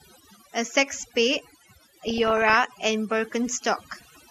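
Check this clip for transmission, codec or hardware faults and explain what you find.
There are three faults in this speech clip: two run throughout and one comes in two bursts.

Overdone noise removal runs throughout. The background drops and is scattered with twinkling specks. A noise reducer set too strong is cutting individual frequency bands close to its noise estimate, and the quieter parts of the voice are being cut along with them.

A dull, gurgling, granular quality also runs throughout, with upper frequencies that come and go. The likely cause is MP2 compression starved of bits, which fits a rate around 80 kbps. Its 32 sub-bands are coarsely quantised, and the higher ones switch off whenever bits run short.

DAB burbling occurs from 2.08 to 2.55 s and again from 3.95 to 4.11 s. It puts short blips of noise in single sub-bands. Reception errors slipping past error correction corrupt samples in the MP2 audio data. 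The error rate here is under one percent.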